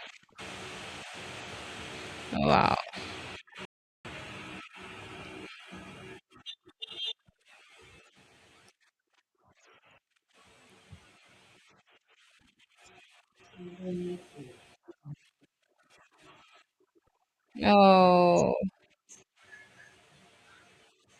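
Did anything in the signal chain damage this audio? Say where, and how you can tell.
Yes, at the playback stage. The speech stops dead at 3.65 s and stays silent until 4.05 s, a gap of about 394 ms, before picking up again. This is a playback stall: the player was likely starved of data or had its output thread held up, so nothing reached the output until it recovered. On a waveform the trace drops abruptly to a flat line mid-flow; a spectrogram shows a clean vertical band of empty energy across all frequencies.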